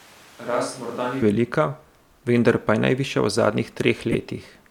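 A switch to a distant microphone is heard from the very start of the clip until 1.22 s, so it is already under way when the audio begins. The speech sounds roomy and hollow, thin in the bass and around 10 dB quieter than what follows, with room noise only about 20 dB beneath it. This likely happened because the close microphone's feed was missing and a farther pickup was used instead, before an abrupt change back at 1.22 s.

A corrupt frame decoded appears from 4.12 to 4.15 s as a brief chirp or burst of noise. The decoder played compressed data with flipped bits, so misread gains and codes placed energy at frequencies where none belonged. The 30-millisecond length points to a few consecutive damaged frames, and the burst peaks high, near -5 dBFS.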